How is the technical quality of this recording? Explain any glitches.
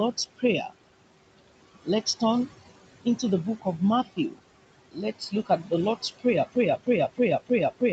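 The recording has clear technical problems: processing artifacts throughout, three stretches where speech is clipped away, and a stuck loop that runs to the end.

Noise suppressor artifacts are present for the whole clip. The suppressor pulls down the steady room noise by about 20 dB, frame by frame, in each band it judges to be noise. The background therefore drops away in the gaps and swells back under the talking. Plain room noise, sitting about 14 dB under the speech, would stay at a constant level rather than pumping like this.

Speech cut by the noise suppressor occurs three times: 4.04 to 4.4 s, 4.9 to 5.01 s and 5.19 to 5.72 s. In each, the suppressor mistook quiet parts of the speech for noise and turned them down with the background, by about 18, 21 and 13 dB at the deepest. Only brief portions are hit, roughly a tenth to a fifth of a second each, so syllable edges and soft sounds seem swallowed. 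A dropout would leave true silence, not a faint, dulled trace.

A broken-record loop starts at 6.56 s and lasts to the end. A fragment of about 313 ms repeats exactly, back to back, and whatever should have followed is lost. The likely cause is a stall in the player or stream that kept resending the last buffered piece. An echo or stutter would decay or vary, while this repeats identically every cycle.

The upper limit near 8 kHz fits the Opus call path and is not a fault.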